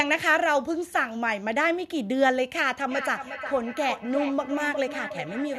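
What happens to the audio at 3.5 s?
At 3.5 s the speech is caught in feedback echo between two devices, running from 2.9 s to the end. A second device on the call replays the sound into a nearby microphone, so the speech returns roughly every 0.4 s, thinner and ringing, peaking about 9 dB below the direct speech.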